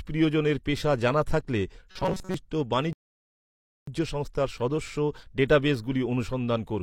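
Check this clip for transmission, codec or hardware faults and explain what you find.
Two faults are audible in this speech clip, both in delivery rather than in the recording.

Robotic sound from repeated short buffers, 1.91 to 2.34 s: the likely cause is audio arriving too seldom, so the last fragment, about 5.3 ms, is looped while most of the real sound is skipped. The loop imposes a fixed 188 Hz buzz, making the speech rigid and metallic.

Rebuffering stall, 2.93 to 3.88 s: playback ran out of downloaded audio and halted until more arrived. The sound drops to silence, then resumes exactly where it stopped, with nothing missing but about 0.94 s of extra time added.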